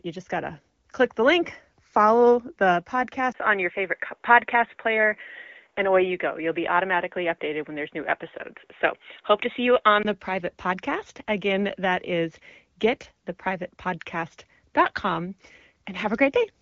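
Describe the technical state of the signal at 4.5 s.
At 4.5 s the speech is inside a dull, boxy stretch from 3.32 to 10.05 s, after "the link follow the" and before "the private podcast". This is likely an input switched to a poorer device. Nothing passes above 3.8 kHz, against the 7 kHz AMR-WB band elsewhere. A 20 ms gap marks the switch, the level shifts by a few decibels, and faint new noise appears.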